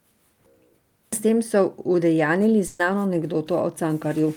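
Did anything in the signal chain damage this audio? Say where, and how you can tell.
Yes, on the network side. Right after "tem so udejanjili", from 2.67 to 2.81 s, a burst of packet loss leaves a gap of about 120 ms. The receiver stretched the last sound and faded it down, then resumed later with that stretch of speech gone. A dropout would go silent instead, and a glitch wouldn't skip speech.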